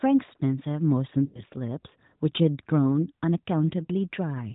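From 1.26 to 1.44 s the speech smears and fades, then smears again briefly at 3.84 to 3.90 s. These are lost AMR speech frames, which the decoder covered by repeating its last good settings at falling gain.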